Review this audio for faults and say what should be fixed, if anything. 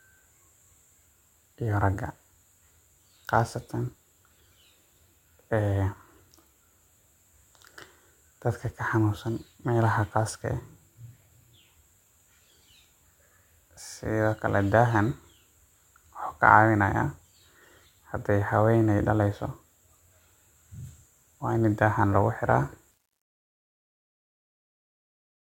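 Truncation distortion on the fade-out starts at 22.91 s, after "lagu xiraa", and runs to 25.48 s. The fade is kept at 10 bits without dither, so from 23.39 s the tail turns gritty. Prevent it by processing fades at higher resolution and dithering when reducing word length.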